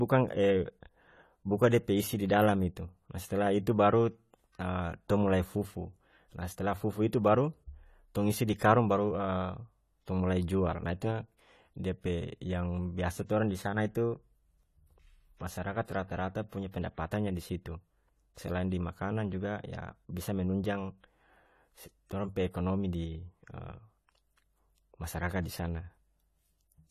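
Speech, and the whole 27 seconds carries plainly audible coding damage that's most likely AAC compression, AAC-LC at a low rate, with the sound pointing to something around 32 kbps. Nothing comes through above 14.1 kHz, so the top end is cut off and everything sounds dull. The encoder is clearly starving the spectrum, and the consonants come out smeared and fizzy. There's also pre-echo from 16.71 to 16.74 s: about 24 ms of short hiss creeping in just ahead of a sharp onset. That's the transform block at work. The quantisation noise gets sized for the loud attack but spread across the whole block, so it leaks into the quiet moment before the transient, and the attack itself lands softer and less crisp than it should.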